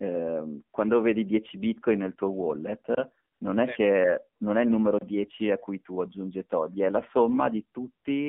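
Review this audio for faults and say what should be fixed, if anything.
The speech passed through the AMR narrowband mobile codec at a low mode, which fits a rate of about 7.4 kbps, with the line limited to 200 Hz–3.5 kHz. Throughout, the sound is band-limited, buzzy and synthetic, because a coarse vocal-tract model replaces the real signal. Preventing it means carrying the call over a wideband codec or a higher AMR mode.

From 3.34 to 3.40 s, AMR comfort noise appears: the sender judged the talker silent and sent no speech frames for 60 ms, so the receiver filled the gap with smooth synthetic noise. The real background briefly switches out. Tuning voice activity detection with a longer hangover would keep speech frames flowing through short pauses.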